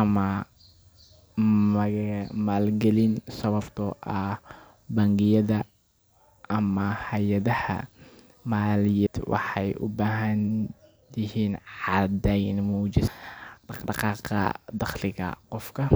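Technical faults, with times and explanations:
9.07 s and 13.08 s, CD skip: the laser jumped spiral turns, muting for a few milliseconds, heard as a tick and sudden resumption elsewhere, the first just before "waxay u baahdaan".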